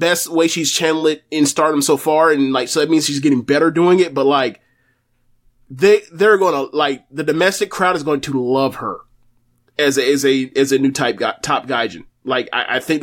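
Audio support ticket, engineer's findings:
No audible faults found; nothing to escalate.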